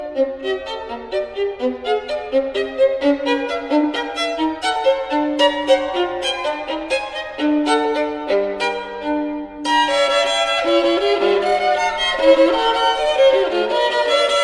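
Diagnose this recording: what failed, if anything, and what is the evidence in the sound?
Nothing in the chain appears to have failed. No stage shows a fault that can be heard anywhere in the recording.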